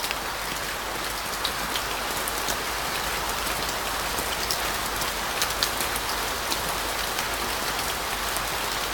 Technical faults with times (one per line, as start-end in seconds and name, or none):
4.32 damaged data in a compressed stream